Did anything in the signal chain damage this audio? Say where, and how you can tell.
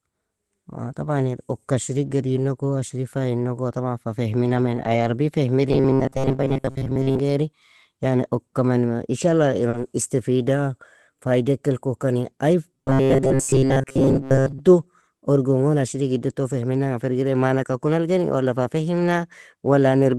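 Yes, the damage comes from the network and jitter-buffer stages of an Opus call at 24 kbps.

Lost packet rebuilt from error correction, 4.45 to 5.15 s: for about 360 ms the sound turns rougher and noisier, yet nothing drops out. That fits a run of roughly 18 lost 20 ms packets, each replaced by the low-bitrate copy carried in the following packet. The decoder played those coarse copies instead of silence. A second, single rebuilt frame sits at 9.73 to 9.75 s.

Robotic sound from repeated short buffers, 5.69 to 7.19 s and 12.74 to 14.60 s: both stretches carry a rigid metallic buzz at 134 Hz that only loosely follows the speech. The likely cause is audio arriving too seldom, so the playout side keeps replaying a fragment of about 7.5 ms to fill time, and most of the real audio in those spans is skipped. That fixed repeat period imposes the steady 134 Hz pitch.

Short concealed packet loss, 9.69 to 9.75 s: a brief smear lasting about 40 ms, where that much audio never reached the decoder in time. 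The receiver extended the preceding sound to cover the hole and then blended back into the incoming stream. The final part of this patch overlaps the single error-corrected frame at 9.73 s.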